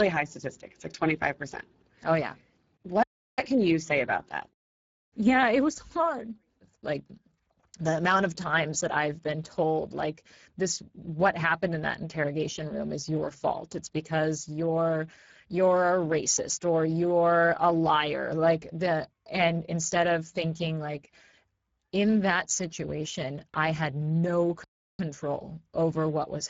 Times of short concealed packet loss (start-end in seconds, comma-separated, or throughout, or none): none